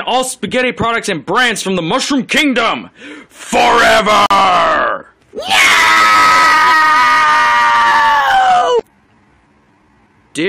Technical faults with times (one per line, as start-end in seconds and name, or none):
4.26-4.31 gap between stream segments
5.58-10.48 time-stretched section